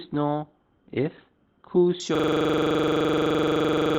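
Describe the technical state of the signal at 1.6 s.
At 1.6 s you're still in the adaptive stream's low-bitrate start (0 to 2.0 s): nothing above about 4.3 kHz, smeary speech, which fits Opus around 12 kbit/s before the step up.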